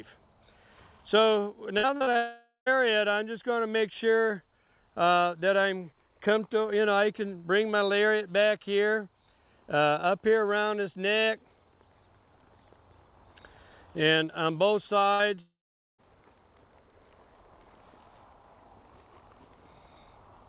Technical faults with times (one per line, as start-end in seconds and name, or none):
1.78-2.17 repeated packet loss (robotic sound)
2.17-2.68 long network dropout
15.14-15.21 burst of packet loss
15.35-15.39 short concealed packet loss
15.41-16.00 long network dropout